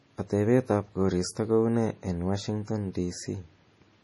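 Heavy MP3 compression, likely at a starved bitrate near 32 kbps, strips everything above 11.5 kHz throughout, leaving the speech dull, watery and swirling, with chirpy s sounds.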